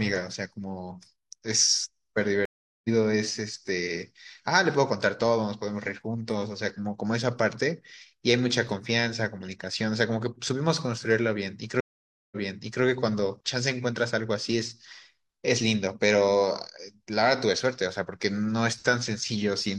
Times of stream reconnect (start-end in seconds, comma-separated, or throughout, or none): 2.45-2.89, 11.80-12.83